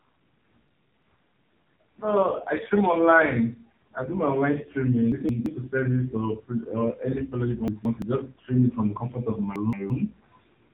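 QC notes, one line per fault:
Throughout: AMR narrowband mobile codec, buzzy, synthetic speech with nothing above 3.8 kHz, from heavy low-bitrate coding at 5.9 kbps.
0.68–1.02 s, 5.12–5.46 s (after "I do my online", before "to service or"), 7.68–8.02 s (after "any fellowship I", before "just stream it from"), 9.56–9.90 s (after "from the comfort of"): chunks out of order, jumbled moments as a 170 ms chunk plays one chunk late.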